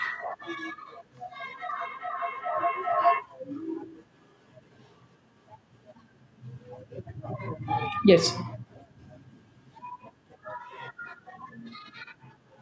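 From 1.4 to 3.3 s, a feedback howl breaks in: two devices in the same room are on the call, so the microphone picks up the loudspeaker and each trip around that loop adds gain. Instead of dying away, the repeats swell and narrow to a tone near 700 Hz, coming round about every 0.4 s with the loop delay. At its peak the howl stands about 6 dB above the speech, until the loop is broken.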